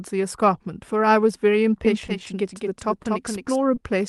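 A doubled audio track runs from 1.85 to 3.56 s. A full-band second copy trails the original by roughly a fifth of a second, a few decibels quieter, with no room colour, and begins and ends abruptly, likely from the sound being captured twice or an edit holding two copies out of step.

A short stall from a late packet falls at 3.03 to 3.07 s, and again at 3.75 to 3.79 s. Each time the jitter buffer ran dry and the receiver stretched the last sound by 20 ms until the packet arrived. The sound hangs briefly, and nothing is lost. Throughout, the Opus call path cuts off sound above 12 kHz.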